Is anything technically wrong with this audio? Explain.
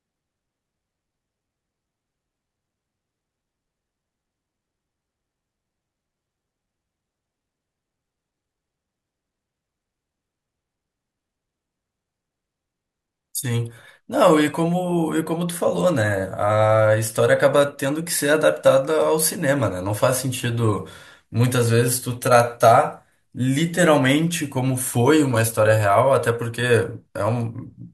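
No, no technical faults found.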